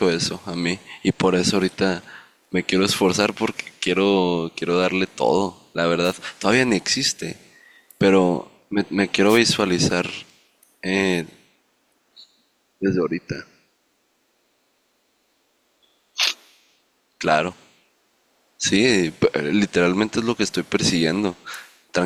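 Wireless microphone noise hits occur at 6.03 to 6.14 s and again at 9.28 to 9.39 s, each about a tenth of a second. The analogue FM radio link fades as reflected signals cancel, so receiver noise surges up as a brief swish of static over the speech.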